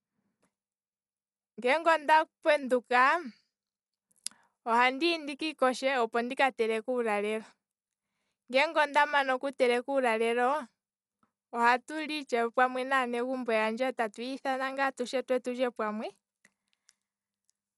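A speech recording carries plainly audible codec damage from start to finish, likely from Dolby Digital compression at a starved bitrate, which fits a stream of around 64 kbps. Nothing survives above 11.5 kHz, so the voice sounds dull, and with many frequency lines left without mantissa bits the decoder fills them with noise, giving a rough, fluttering haze around tonal parts. On a spectrogram this shows as a hard ceiling at 11.5 kHz and speckled, grainy texture between harmonics.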